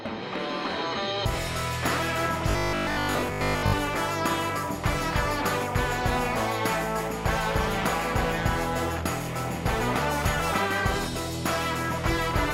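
From 2.51 to 3.73 s the audio takes on robotic sound from repeated short buffers: a rigid, metallic buzz pitched at 50 Hz. The likely cause is new data arriving too slowly, so playback loops the last 20 ms again and again while most of the real material is skipped. Unlike mains hum, which also sits at 50 Hz, this buzz is not layered beneath intact audio. It replaces the sound, which survives only as a rough outline.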